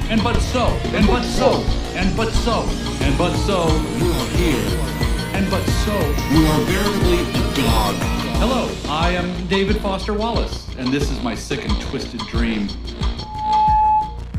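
A microphone picked up its own loudspeaker, so loop gain passed unity and loudspeaker feedback squeal erupts at 13.19 to 14.25 s, an 858 Hz tone swelling over roughly 0.4 s to sit some 5 dB above the audio.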